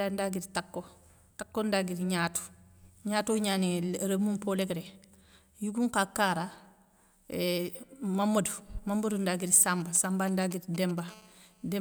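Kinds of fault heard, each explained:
GSM signalling bursts: From 9.81 to 11.0 s a nearby 2G phone sends brief groups of radio pulses while signalling, not yet in a call. The audio circuit rectifies them into sound. The result is a galloping dit-dit-dit of short raspy buzzes, pulsing at 217 Hz inside each group. It sits roughly 20 dB below the speech. It has no link to what is being said.
GSM phone buzz: From 11.08 to 11.76 s the phone settles into call mode and transmits its bursts continuously, 217 times a second. The circuitry demodulates this pulse train into a steady, hard buzz at 217 Hz, thick with harmonics. It stays at about 28 dB below the speech and runs unbroken to near the end of the clip. It is quieter than the signalling bursts but constant. It has no connection to the speech.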